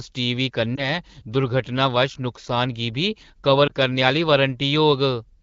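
A speech clip over what sounds like an AMR-WB (HD Voice) call, clean enough to suggest one of the higher modes, around 12.65 kbit/s, with two spots of lost AMR speech frames. Each one looks like a single dropped 20 ms frame, where the decoder covers the gap by reusing the last good pitch and vocal-tract settings at lower gain. You get a short dip or warble from about 0.75 to 0.99 s, and a quicker blip around 3.67 to 3.72 s.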